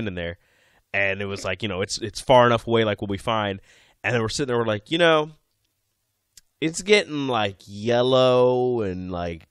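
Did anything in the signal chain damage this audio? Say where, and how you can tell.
Yes. From 4.58 s to the end at 9.51 s, the speech suddenly drags to about two-thirds of its earlier pace (0.664x) while its pitch stays put. This is a time-stretched section, most likely introduced when the file was processed before storage: software lengthened the audio to fill a set duration and held the pitch steady by repeating short slices of the waveform.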